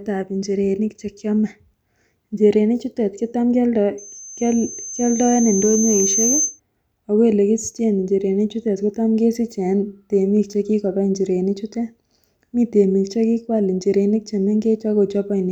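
From 3.98 s to 6.60 s, just after "njirenik chutet kotam kioldo", a thin, piercing tone at 6.2 kHz rises out of the speech, swelling over roughly two seconds until it sits at about the same loudness as the talker, then stops before "ako elekisichen njirenik chutet". This is loudspeaker feedback squeal: the microphone was hearing its own loudspeaker, and at 6.2 kHz the round trip returned more than it sent, so that one frequency kept reinforcing itself until the loop was broken.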